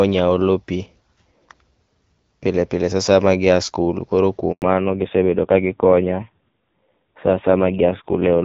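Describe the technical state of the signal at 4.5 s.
At 4.52 s the call is being moved from one network link to another, and for about 100 ms, until 4.62 s, no speech frames reach the receiver, a handover gap. The speech fades out within a few tens of milliseconds and the line goes silent until the new link picks up, so whatever was said in that stretch is simply missing. Around it, the AMR wideband coding sounds clear, with only light codec damage, consistent with a rate near 12.65 kbit/s.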